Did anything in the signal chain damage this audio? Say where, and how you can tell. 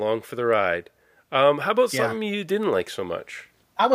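Yes, automatic gain rising in the call-processing stage. From 0.35 s to the end, the level climbs by about 6 dB, with the speech and background noise swelling together as the gain control compensates for a quiet input. The waveform envelope ramps upward, and the spectrogram's noise floor brightens across all frequencies.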